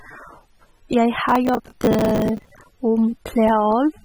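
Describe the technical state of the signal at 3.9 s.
At 3.9 s the speech sounds dull and smeared, with a fizzy, warbling texture, and nothing above 13.3 kHz; this persists throughout the clip. It is likely AAC compression at a low bitrate, around 27 kbps, which coarsely quantises spectral lines and leaves holes.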